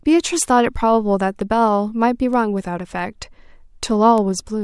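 A speech recording carrying word clock ticks: about five sharp, single-sample clicks from 0.49 s to 4.18 s, roughly one per second. The receiving device runs on its own clock, drifting around 50 ppm from the sender, so each slip drops or repeats a sample.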